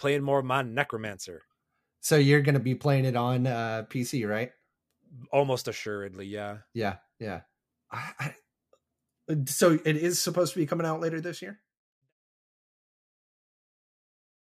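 The clip is speech, and nothing is technically wrong with it; the level fades out smoothly from around 11 s to 12.13 s, as an editor would do it.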